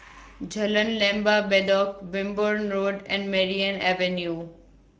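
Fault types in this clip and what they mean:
Speex codec: CELP coding starved the excitation of bits, consistent with about 16.8 kbps, leaving the speech plainly noisy and hoarse throughout.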